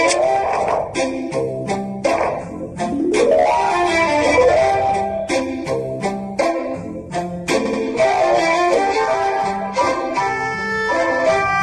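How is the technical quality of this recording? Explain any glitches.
The recording is held back by plainly audible lossy coding throughout and a single stutter near the end.

Across the whole clip the treble is cut off and the high detail swirls and chirps, most plainly on bright, noisy sounds. This is likely MP3 compression at a low rate, consistent with about 64 kbps. The encoder ran short of bits, dropped everything above a fixed frequency, and let weak frequency lines switch on and off from frame to frame. That gives the watery, metallic texture. Unlike plain low-pass filtering, it moves and sparkles instead of sounding evenly dull.

At 7.64 s, running to 7.80 s, repeated frames occur. A block of about 78 ms plays twice more than it should, a quick stutter. The duplicated compressed data, which fits a run of a few MP3 frames, adds roughly 157 ms to the clip's length. A dropout would remove sound, and a buffer underrun would leave silence or a repeated tiny fragment. 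This fault repeats a longer, intact chunk of audio.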